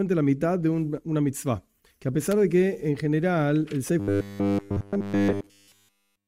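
At 2.31 s a sharp snap cuts through the sound. It is an electrical switching spike. It is over almost instantly and sits on top of the audio rather than replacing it. A nearby switch, motor or static discharge likely threw off a brief arc, and the audio line picked it up as a burst of interference. It reads as a sharp snap, hard-edged and unrelated to anything else in the audio.

From 4.00 s to the end, the sound turns robotic from repeated short buffers. It becomes a rigid, metallic buzz with a fixed pitch of 100 Hz. That pitch fits a 10 ms chunk replayed over and over. Fresh audio was likely arriving too slowly, so the software kept repeating its last short buffer while real audio was skipped. Essentially all of this stretch is repeated material. Only a rough outline of the original sound comes through.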